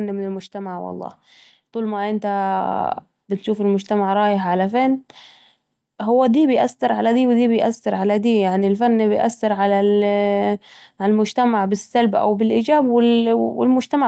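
The automatic gain control judged the input too quiet and kept raising its gain from 1.72 to 3.94 s, after "من المجتمع والله" and before "رايح علي فين". Speech and background swell together by about 8 dB, within audio that stops at 8 kHz.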